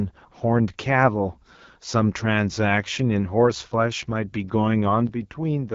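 Throughout, the speech carries the AMR wideband (HD Voice) codec's plainly audible raspy roughness, with nothing above 7.4 kHz. That rasp, beyond simple band-limiting, fits the low 8.85 kbit/s rate.

From 5.07 s to the end at 5.74 s, the level drops abruptly by about 6 dB, a step rather than a fade, likely one channel dropping out before the mono sum.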